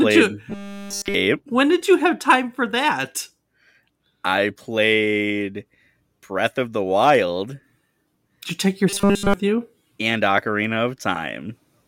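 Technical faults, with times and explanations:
0.50–1.14 s and 8.90–9.34 s (the second just after "you take your"), robotic sound from repeated short buffers: the speech becomes a rigid metallic buzz at 200 Hz. The likely cause is audio arriving too seldom, with nearly all of it replaced by a repeated 5 ms slice. On a spectrogram this shows as flat, evenly spaced harmonics at multiples of 200 Hz. The waveform shows identical 5 ms cycles.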